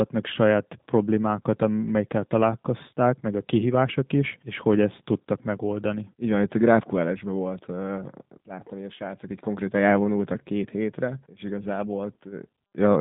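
It's a speech clip that's been through a G.729 codec for its whole length, and you can hear it plainly. The voice sits in a narrow phone-line band, roughly 150 Hz to 3.7 kHz, with nothing at all above 3.8 kHz, so it's thin and dull. That slightly rough, synthetic edge comes from the codec rebuilding each 10 ms frame from a vocal tract filter, a pitch predictor and a few pulses, which fits an 8 kbit/s G.729A stream.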